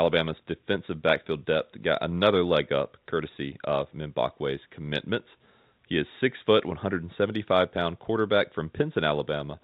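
The speech comes through G.711 A-law telephone coding with everything above 4 kHz absent, as that format requires, and nothing in the signal departs from what the coding itself imposes.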